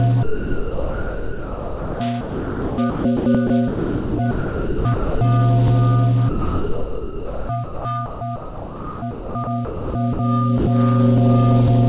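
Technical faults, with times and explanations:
0.23–5.21 s and 6.29–10.19 s, sound chopped by the voice detector: the sound keeps breaking up into steady synthetic hiss, about 3.9 s and 2.9 s of it replaced. The sender's detector likely toggled transmission on and off, with comfort noise filling each gap.
10.58–10.67 s, sound dropped by the voice detector: for 90 ms the sound gives way to flat, steady noise, then returns. The detector likely judged this stretch background and stopped sending, and the receiver substituted comfort noise, capped at 4 kHz like the surrounding call audio.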